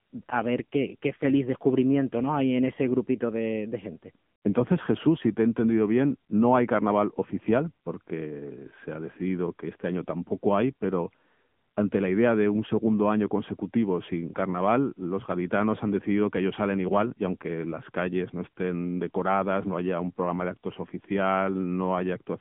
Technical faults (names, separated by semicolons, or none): AMR narrowband mobile codec